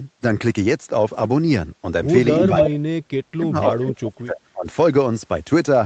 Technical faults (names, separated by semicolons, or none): lost packet rebuilt from error correction; echo leak; speech suppressed in double talk